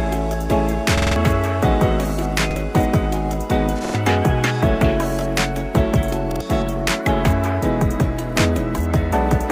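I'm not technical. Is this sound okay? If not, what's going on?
No. Four short stutters occur, at 0.98, 2.51, 3.85 and 6.32 seconds. At each one a tiny slice of sound repeats with a hard join: five times in a row at the first, twice at the second, and three times at the third and fourth. This is a repeated buffer. New audio arrived late, so the player replayed its last chunk, about 46 milliseconds long, which fits a 2048-sample buffer. The sound that should have come next was lost.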